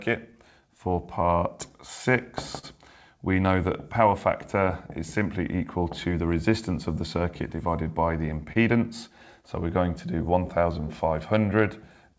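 The audio carries clock drift between sender and receiver, with the sender's clock running about 2% slow, so the receiver keeps running ahead of it for the whole clip. From 0.61 to 12.12 s this produces repeated timing corrections: small, unevenly spaced stretches that play the sound at 99% speed and add roughly 150 ms in total. Each is small, not a gap. Two short stalls from a late packet stand apart from that steady drift. At 2.59 to 2.65 s a sound is held for 42 ms, and at 8.53 to 8.57 s for 26 ms. Nothing is lost at either point, because playback resumes exactly where it stopped, unlike a dropout that skips ahead. The band stops at 8 kHz throughout, which fits a G.722 call codec at 64 kbps.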